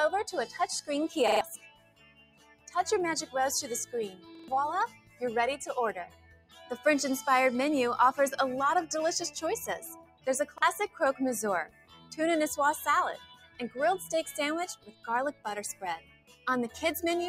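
A noise suppressor built for speech has been left on for music or sounds throughout. It treats held tones, ambience and decays as noise. Level swings by around 15 dB as it grabs and releases. Onsets get through, but sustained parts sink, so the sound pumps and thins. Six stretches show sound cut by the noise suppressor. The first is 0.46 to 0.89 s, dropping by about 13 dB. The others reach about 18 to 19 dB: 1.55 to 3.34 s, 4.09 to 6.85 s, 9.93 to 11.01 s, 11.65 to 12.16 s and 13.17 to 16.79 s. In each, sustained and fading material is pushed down and tails are shortened. Sudden hits stay closer to full level. There are also three repeated buffers. Playback starved, so the device replayed the last chunk of audio. Each chunk lasts about 43 ms, which fits a 2048-sample buffer. At 1.28 to 1.41 s and 4.35 to 4.48 s the chunk plays three extra times. This makes a short stutter with hard joins and loses about 150 ms of new audio. 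At 10.58 s it repeats once, a brief glitch costing about 40 ms.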